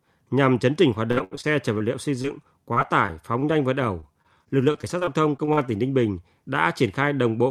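From 1.11 to 1.82 s, right after "chấn chỉnh hoạt" and ending before "liệu xây", repeated packet loss gives robotic sound. Six gaps, the longest 75 ms, are bridged by extending the preceding audio, so about 28% of the stretch is synthetic and the speech turns choppy.

Just after "liệu xây", at 2.22 to 2.26 s, a short concealed packet loss drops about 20 ms. The decoder extrapolates over it and crossfades back, leaving a brief smear or wobble.

The same robotic pattern recurs from 2.74 to 3.44 s, with four gaps up to 26 ms. It returns from 4.0 to 5.59 s, after "nhanh vượt", with eleven gaps up to 39 ms.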